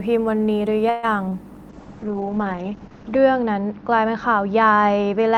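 A call audio freeze runs from 0.89 to 1.05 s. For about 140 ms the speech stops advancing and the last sound is drawn out into a fading buzzy hiss that never drops to silence. When the flow resumes, the speech picks up exactly where it left off, so nothing is lost but everything after it is pushed 137 ms later. The likely cause is packets held up in transit until the jitter buffer ran dry.

Short concealed packet loss follows at 1.29 to 1.33 s. A 20 ms piece of the speech never reached the decoder in time, so the receiver invented a replacement by extending the preceding sound and then blending back into the real signal. What comes through is a brief smear or wobble in place of the real 20 ms.

A call bitrate drop starts at 1.70 s and lasts until the end. The encoder falls from 32 kbps to 8 kbps as the bandwidth estimate collapses, and it stays at the lowest rate for about 1.5 s. With so few bits the speech is coded coarsely and turns rough and watery. 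The audio band also narrows from 20 kHz to 8 kHz, which removes the air and crispness and leaves the speech muffled.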